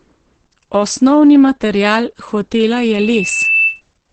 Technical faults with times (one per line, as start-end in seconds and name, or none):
0.00-4.13 Opus voice compression
2.76-3.81 loudspeaker feedback squeal